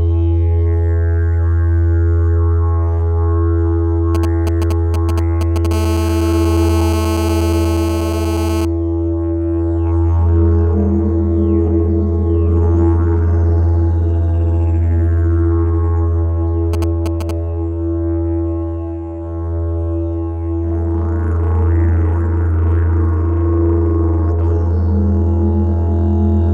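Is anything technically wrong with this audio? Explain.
Yes, there's a nearby 2G phone getting into the audio circuit, and you can hear it in two ways.

GSM signalling bursts show up from 4.15 to 5.67 s and again from 16.74 to 17.31 s. The phone is only sending short clusters of radio bursts, the kind of handshaking it does before a call or text, and the circuit rectifies them into audio. You get that galloping dit-dit-dit of brief 217 Hz buzzes, roughly 10 dB below the signal.

GSM phone buzz runs from 5.71 to 8.65 s, right after the first signalling stretch, as if a call had just connected. Now the phone transmits continuously at 217 bursts a second, and the rectified pulses turn into a steady, hard, raspy 217 Hz buzz packed with harmonics. It sits about 10 dB below the signal and has nothing to do with the audio underneath.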